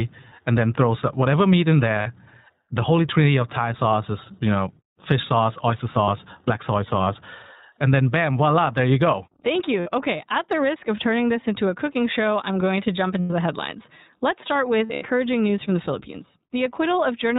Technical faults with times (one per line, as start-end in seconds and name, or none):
0.00-17.39 iLBC codec
2.02-2.08 lost iLBC frames
6.04-6.09 lost iLBC frames
9.80-9.88 lost iLBC frames
13.20-13.32 lost iLBC frames
14.86-15.04 lost iLBC frames